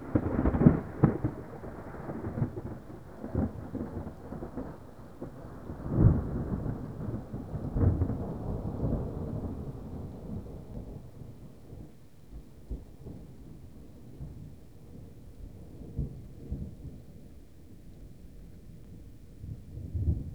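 At 10.74 s and again at 18.84 s there's a CD skip. A knock or a flaw made the laser jump onto a different turn of the disc's spiral, so you hear a tiny tick from a mute of just a few milliseconds, and then the sound carries on from a different spot.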